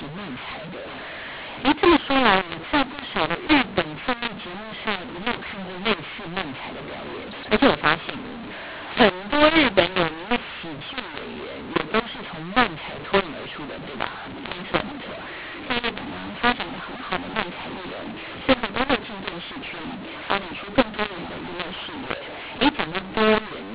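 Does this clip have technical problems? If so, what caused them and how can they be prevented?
Yes. Throughout the clip, the speech shows a mu-law and A-law mix-up. It was encoded with G.711 A-law but decoded as mu-law, so each 8-bit code maps to the wrong amplitude. Loud and soft levels are scrambled, the speech is harsh and gritty, and the quietest samples are pushed well above silence, filling pauses with hiss. On a waveform, gaps between phrases show a raised noise floor instead of a flat line, and peaks look distorted. On a spectrogram, broadband grain smears across the full band up to the 4 kHz ceiling of the telephone coding, including in pauses. To prevent it, make sure the decoder uses the same companding law as the encoder, A-law here, either by signalling the codec explicitly in the call setup or file header or by fixing it in the configuration at both ends.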